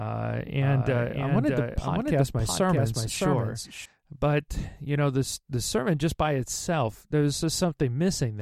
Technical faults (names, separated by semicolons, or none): doubled audio track